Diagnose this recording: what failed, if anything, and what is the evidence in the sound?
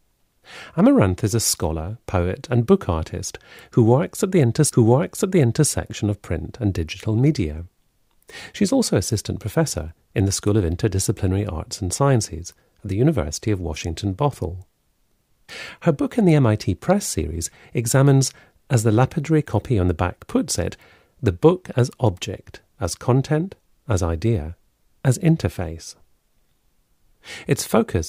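At 4.69 s the speech jumps back with a small blip and one second of it plays again, through 5.69 s. That is a stream segment repeated: the player fetched or queued the same segment twice, so the playback stage delivered that stretch a second time.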